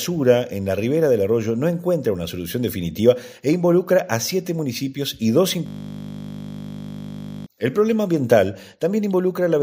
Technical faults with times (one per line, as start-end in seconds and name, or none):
5.66-7.46 system hang loop